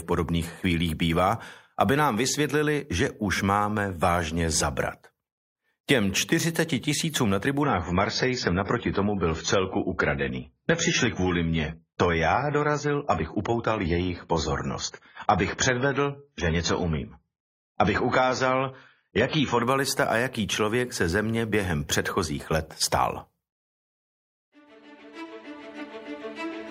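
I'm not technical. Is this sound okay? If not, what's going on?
No. From 7.63 s to 19.63 s, about 12 seconds, the sound gets worse. This is an adaptive stream at a lower bitrate. The player switched to a lower-quality copy of the audio, likely because the connection slowed. The bright, crisp top end disappears, with nothing above 7 kHz. The sound turns dull. The switch happens suddenly, with no gap or pause. At 19.63 s it jumps back to full quality.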